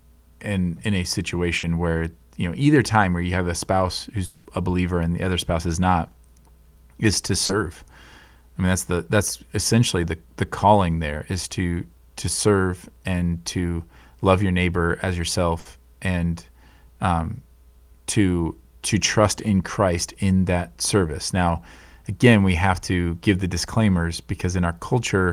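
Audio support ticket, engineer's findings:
Held buzz/hiss fading out, then a jump ahead, at 1.57–1.65 s and 15.59–15.67 s. Burst of packet loss on the network path: about 60 ms lost per event, bridged by the receiver's concealment extending the last speech sound, with that stretch of audio missing.

Smeared, fading continuation of the last sound for about 200 ms, 4.25–4.47 s, with no true silence before speech returns further on. Likely a long network dropout, with receiver concealment covering the whole gap and the content skipped.

Brief smear/wobble at 7.45–7.51 s. Short concealed packet loss: about 40 ms never reached the decoder in time. The receiver extrapolated from the preceding sound, then crossfaded back into received audio.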